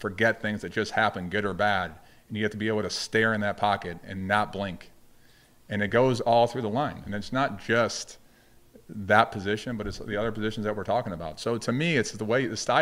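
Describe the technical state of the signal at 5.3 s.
At 5.34 s the signal shows damaged data in a compressed stream, a single momentary event rather than a sustained span. Corrupted bytes at that point leave the decoder unable to read the affected frame correctly, so it loses sync and hunts for the next valid frame header. The result is a short chirp, squawk, click or brief hole, usually with a jump ahead in the audio.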